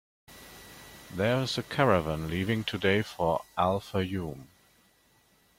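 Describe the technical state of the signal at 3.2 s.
At 3.2 s the signal is intact, with no audible fault at that point in the speech.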